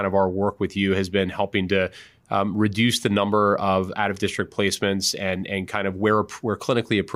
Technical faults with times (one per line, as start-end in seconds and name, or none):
none